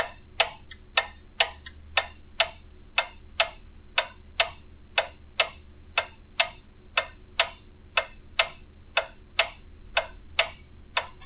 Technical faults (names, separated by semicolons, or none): none